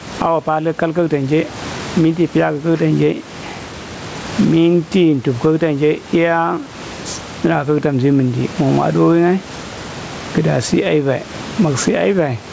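Throughout the speech, gain pumping is present: the input gain was likely set far too high, so a fast limiter clamps down on every loud syllable. The gain swings around 15 dB, leaving the level flattened and squashed.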